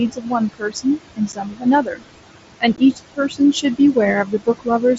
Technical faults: noise suppressor artifacts; speech cut by the noise suppressor; unconcealed Bluetooth headset packet loss

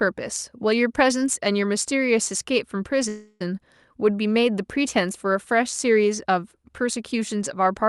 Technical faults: call audio freeze

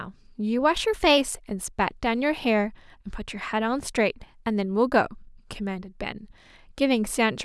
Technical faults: drift correction step

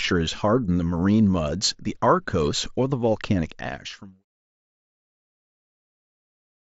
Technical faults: none

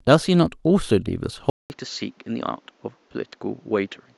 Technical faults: input switched to a poorer device

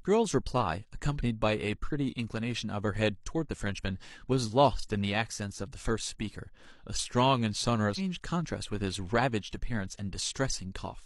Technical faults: damaged data in a compressed stream

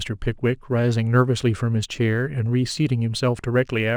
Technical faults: sample clock jitter

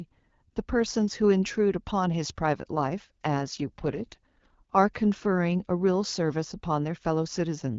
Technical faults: AMR rate drop

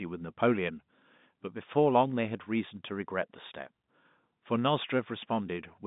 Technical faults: none

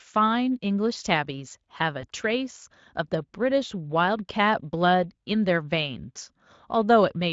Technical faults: VoIP packet loss concealed by the speech codec

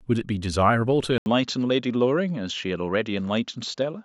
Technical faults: input switched to a poorer device

